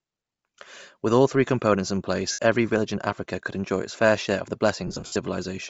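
Throughout the speech, the upper spectrum sounds thinned and refilled with a grainy, breathy hiss, plainly audible. This is likely Bluetooth LC3 compression at a low rate, a sound that fits about 32 kbps with 7.5 ms frames.

Lost LE Audio frames occur at 2.31 to 2.39 s, a 67.5 ms gap. From 4.87 to 5.16 s, about 200 ms of losses are scattered, the longest around 70 ms. The decoder repeats the last spectrum with random signs, smearing speech into noise.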